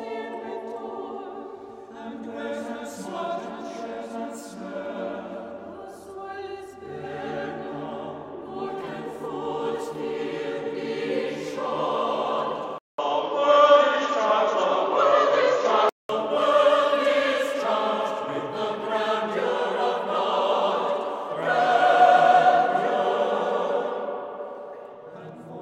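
From 12.78 to 16.09 s the input likely switched to a poorer device: after a 200 ms silence, the sound dulls, cut above 7.2 kHz, with faint new background noise.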